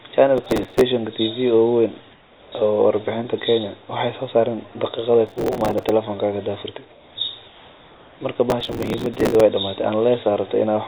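Processor overload crackle first hits from 0.38 to 0.81 s. The processor repeatedly missed deadlines on very short buffers, a few milliseconds each, and replayed stale audio at each miss, producing a burst of gritty, tearing crackle. The same overload returns from 5.27 to 5.89 s and, longest, from 8.50 to 9.40 s.

Between these, the background is swapped for comfort noise from 2.12 to 2.52 s, 6.92 to 7.16 s and 7.48 to 8.20 s, likely because transmission paused while no speech was detected. Each pause becomes a flat, featureless hiss about 3 to 4 dB quieter, over a band that stops at 4 kHz.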